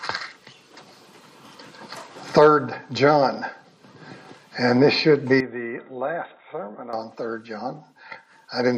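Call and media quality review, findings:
5.40–6.93 s: dull, level down about 10 dB, nothing above 3.8 kHz, faint new noise floor, no gap at switch. Likely input switched to a poorer device; its own noise rules out codec narrowing.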